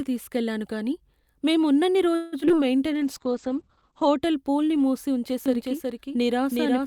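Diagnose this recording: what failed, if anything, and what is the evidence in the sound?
Repeated packet loss (robotic sound), network stage, 2.15 to 2.52 s: four gaps, the longest 171 ms, with over half the span patched by extending the previous sound. The speech turns choppy and robotic, with about 80 ms simply missing.

Jitter buffer slow-down, buffer stage, 2.86 to 3.54 s: the receiver repeated pitch periods and pause fragments to rebuild its reserve, adding 57 ms. Speech runs at 92% speed with unchanged pitch, so sounds are audibly drawn out.

Call bitrate drop, codec stage, 2.95 to 4.27 s: the encoder fell from 64 to 10 kbps, staying at the floor for about 1.1 s, and the audio band narrowed from 20 kHz to 8 kHz. The speech sounds coarse and muffled until the rate recovers.

Doubled audio track from 5.46 s to the end: a dry, full-band second copy trails by roughly 0.4 s at about 5 dB below the original, starting abruptly. 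The cause is likely a second capture through a slower path mixed back in.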